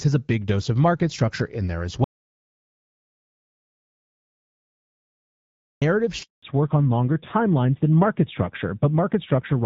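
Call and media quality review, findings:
Audio dropout to silence, 2.04 to 5.82 s (about 3.8 s). Input path likely lost, from a device disconnect, link failure or mute, while the encoder kept writing silence. Speech cuts off mid-flow into dead silence with no room tone, then resumes abruptly. Content in the gap is unrecoverable.

Handover gap, 6.23 to 6.43 s, 200 ms. Call moved between networks and no speech frames arrived during the switch. Speech dies away within tens of milliseconds, then a short silent hole until the new link picks up. Syllables in that window are lost.

Fallback to narrowband, 6.43 s to end. Codec dropped from AMR-WB (HD Voice) at 12.65 kbit/s, which sounds clear before this point, to AMR-NB at 7.4 kbit/s. Nothing above 4 kHz survives. The voice turns dull, muffled and rougher, and sibilants lose their crispness.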